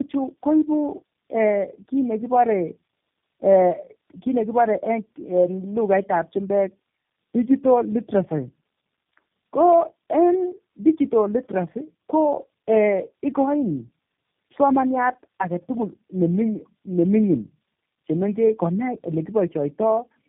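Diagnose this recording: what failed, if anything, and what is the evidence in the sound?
Tandem speech coding at the codec stage, throughout: the speech is rough, muffled and warbly, with nothing above 3.7 kHz. The degradation compounds beyond what one narrowband codec produces, which fits three speech coders in a row.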